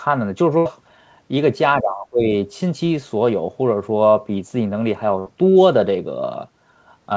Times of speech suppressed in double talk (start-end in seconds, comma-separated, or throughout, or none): 1.81-2.33